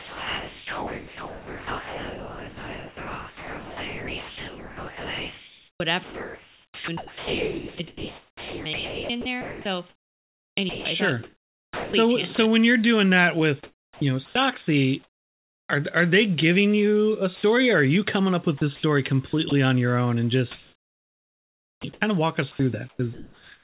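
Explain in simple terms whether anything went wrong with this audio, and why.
Yes, there are two related faults.

Sound chopped by the voice detector: from the start to 12.37 s, 13.63–15.69 s (after "when you're doing that"), 18.57–19.51 s (after "you coming up with") and 20.51 s to the end, the speech repeatedly flickers into fake hiss. This is likely the sender's voice detector switching on and off many times.

Sound dropped by the voice detector: at 17.35–17.43 s, just before "or are you coming", the speech gives way once to a short steady hiss, then returns. Unlike the chopping, it happens only once.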